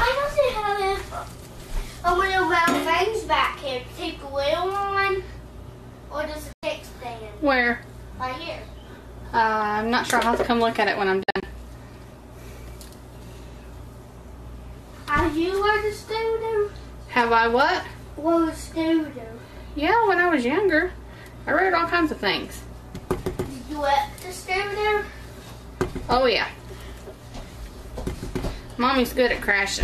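At 6.53 s the sound fades out within 3 ms and stays silent until 6.63 s. From 11.23 to 11.43 s it breaks into several short holes totalling 120 ms, the longest 48 ms. Both are digital broadcast dropouts: the receiver muted on missing or corrupted frames, and that audio is lost.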